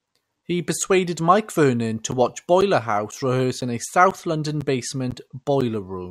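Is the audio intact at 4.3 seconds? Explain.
No. At 4.3 seconds the speech falls within periodic USB or driver dropouts running from 2.11 to 5.62 s: every 0.5 s a blocked bus or driver drops roughly 10 ms of audio into silence, giving evenly spaced ticks, unlike random crackle, heard only while sound plays.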